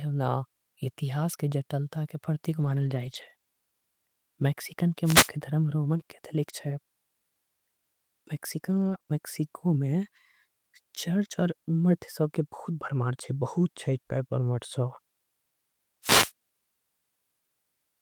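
From 2.61 to 3.31 s the speech turns rougher and grainier but never drops out. This is a lost packet rebuilt from error correction: packets went missing, and the decoder played the low-bitrate backup copies carried in the following packets, about 360 ms of rebuilt audio in total.

Right after that, at 3.33 to 3.37 s and again at 3.37 to 3.41 s, there is a brief smear where a moment of sound seems to blur away. These are two back-to-back cases of short concealed packet loss. Each 20 ms hole had no backup copy, so the receiver extended the last sound to fill it and then blended back into the real audio.

At 5.04 to 5.30 s a short swish of static breaks over the speech. This is a wireless microphone noise hit. The FM radio link faded as reflections cancelled, and receiver noise rose up over the signal.

Between 8.73 and 9.09 s the speech goes choppy and robotic. This is repeated packet loss (robotic sound): three gaps, none longer than 20 ms and 60 ms in all, were patched one after another, so about 17% of the stretch is filler, and around a tenth of a second is roughly rebuilt.

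At 16.02 to 16.32 s a second burst of static from a wireless microphone noise hit sweeps across the speech.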